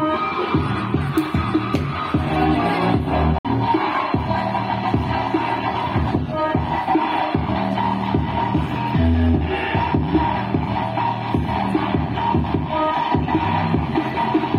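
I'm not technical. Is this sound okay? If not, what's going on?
No. At 3.38 s the sound cuts out completely for about a tenth of a second and comes back at 3.49 s. This is a Bluetooth dropout, likely from wireless audio packets arriving too late for the headphones, which play silence and then continue further along.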